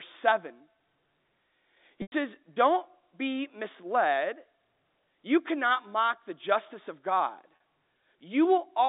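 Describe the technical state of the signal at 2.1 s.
At 2.1 s the stream is inside a stretch of packet loss with pitch repetition, running from 2.02 to 2.12 s, about 100 ms of missing audio, which fits five 20 ms packets. With nothing arriving, the receiver keeps looping the last pitch period and fades that copy out over roughly 50 ms. The speech briefly holds as a buzzy, frozen tone, thins into a short silence, then cross-fades back in, all within the telephone band of 250 Hz to 3.7 kHz carried by the G.711 coding.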